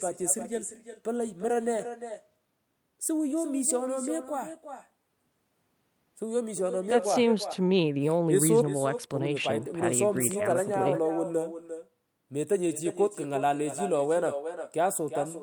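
From the first second to the last, every phrase has a quieter ghost trailing it by roughly 400 ms, sitting about 10 dB below the talker. That's echo with no canceller: the far end is playing the call through a loudspeaker, their microphone catches it, and nothing strips it out, so the voice travels back across the network. The returning copy sounds thinner than the original, giving the speech a smeared, doubled quality.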